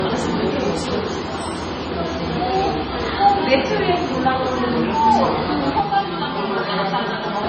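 Throughout, the audio has nothing above 9.7 kHz and a smeared, swirly top, likely low-bitrate audio saved at a high bitrate: a low-bitrate MP3 re-encoded higher.

From 5.81 to 7.43 s, channel delay (comb filtering) appears: one channel lags around 5 ms, so the mono sum cancels at evenly spaced notches starting near 100 Hz, sounding hollow and phasey.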